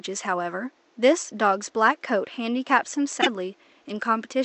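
Short speech recording with a quiet room-noise floor sitting about 39 dB under the talker. At 3.21 s the sound skips forward and the next 60-odd milliseconds, up to 3.27 s, come out damaged. That's likely a broken MP3 bit reservoir: frames around there were dropped, so the following ones reached back for borrowed data and decoded another frame's bytes. With 24 ms frames, that's about two to three frames of mangled output.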